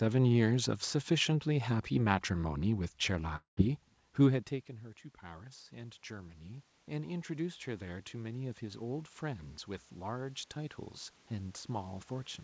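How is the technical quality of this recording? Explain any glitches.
The recording has two clear faults: a gap in the audio and a slow rise in level. The sound also stops at 8 kHz, which points to a wideband call codec such as G.722 at 64 kbps.

Long network dropout, 3.36 to 3.59 s. About 0.22 s of audio never arrives. The likely cause is lost packets on the network. The receiver fills the gap by stretching the last sound. That fill lasts about 0.21 s. It turns into a fading buzz or hiss, then about 0.12 s of near silence. The speech then resumes further on, with the missing part gone.

Automatic gain rising, 5.20 to 12.38 s. The input level falls by about 18 dB. This follows the talker moving back from the microphone around 4 s. The gain control hears the quieter input and raises its gain by about 11 dB over several seconds. The speech and the room noise swell together. The level creeps upward to the end without fully recovering.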